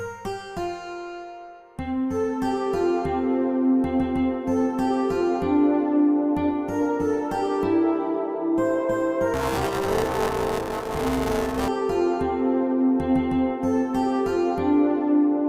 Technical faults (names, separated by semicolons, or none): buffer tearing